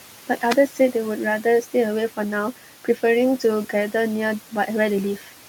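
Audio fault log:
Throughout: noise suppressor artifacts. The processing pulls the room noise, which sits about 17 dB under the speech, down by about 12 dB wherever it judges a band to hold only steady noise, frame by frame. As a result the background drops away in the gaps and comes back under the voice. This pumping tied to the speech is what separates it from a plain noise floor, which would hold level.
0.37–0.55 s: cable scratch noise. A short burst of dense, irregular rustling lasts just under 0.2 s and rides nearly as loud as the speech itself. Its ragged, crackly grain and its lack of any link to the speech rhythm point to contact noise, likely from a worn cable, connector or control being moved. That sets it apart from suppressor flutter, which is smoother and follows the voice.
0.68–0.95 s and 5.17–5.33 s: speech cut by the noise suppressor. In each of these spans the suppressor mistakes part of the speech for background and turns it down along with the noise. 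The deepest dip is about 11 dB, and the affected parts add up to around a tenth of a second each time. The parts it turns down come out swallowed and faint, unlike a dropout, which would leave a clean hole of silence.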